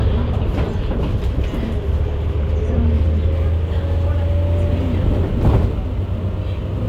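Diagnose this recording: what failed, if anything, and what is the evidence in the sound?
Crude rate conversion at the sample-rate conversion stage from 3.32 s to the end. Nearest-sample picking, consistent with 48 kHz to 44.1 kHz, adds gritty inharmonic fizz roughly 40 dB down, visible as stray spectrogram lines.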